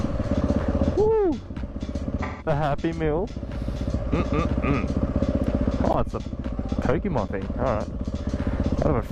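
At 2.23 s you get an AAC frame loss with concealment, running to about 2.47 s. The decoder lost a stretch of data, about 170 ms, which fits something like four AAC frames, and it papered over the hole by reusing the last good spectrum with its phases shuffled. That's why the patch sounds smeared and a bit noisy and phasey rather than dropping out.

Then there are three blocks of digital silence, at 3.30 s, 5.93 s and 7.28 s, lasting about 5 ms, 15 ms and 10 ms. In each one the output just got zeros for a moment, which fits the program missing its deadline to fill the buffer. There's no fade in or out, so the edges are abrupt. The shortest comes across as a tick, and the 15 ms one, just under the point where a gap reads as silence, is more of a tick or dip too.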